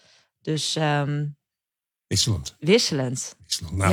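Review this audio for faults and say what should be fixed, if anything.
Nothing stood out on listening, so there is nothing here that needs fixing.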